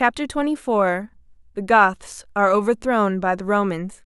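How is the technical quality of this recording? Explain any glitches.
No technical glitches can be heard in this recording. The speech continues without any break or disturbance that would need explaining.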